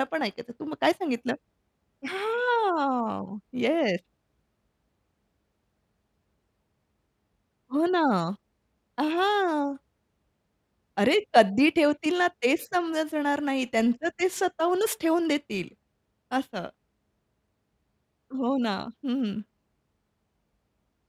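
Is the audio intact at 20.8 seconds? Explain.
Yes, at 20.8 seconds the speech plays through with no dropout, click, distortion or other audible fault.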